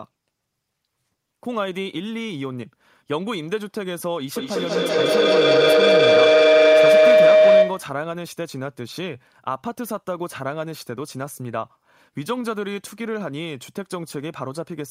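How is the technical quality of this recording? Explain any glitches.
The recording has one serious fault. From 4.36 to 8.06 s there is feedback howl. Sound from a loudspeaker reaches a microphone on the same call and loops back louder each pass. It narrows to a tone near 700 Hz, pulsing about every 200 ms. It peaks about 13 dB above the speech.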